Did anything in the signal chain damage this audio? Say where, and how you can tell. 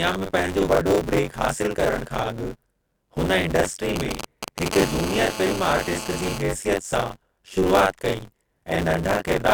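Yes. Throughout the speech there is buffer tearing at the driver or buffer stage: a robotic rattle at about 93.8 Hz that rides on the voice and drops out in the pauses. That rate matches a 512-sample buffer, where the writer and reader have slipped so that roughly 40 percent of each period repeats audio from about 40 ms earlier, with a hard splice at both edges. Because it follows the signal, it is not interference.

From 3.96 to 4.68 s, GSM signalling bursts enter through the analogue wiring. They sound like a galloping dit-dit-dit of short buzzes built on a 216.7 Hz burst rate, at about 5 dB below the speech. A nearby 2G phone that transmits only in clusters, as it does while setting up a call or receiving a text, is picked up and rectified by the audio circuit. Unlike tearing, it is present whatever the speech is doing.

From 4.72 to 6.38 s the pattern becomes a continuous GSM phone buzz, also analogue. 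It is a hard, raspy 216.7 Hz tone rich in harmonics, sitting about 10 dB below the speech. A nearby phone is now transmitting steadily in a call. It is told apart from the earlier bursts by having no gaps, and from tearing because its pitch and presence do not depend on the voice at all.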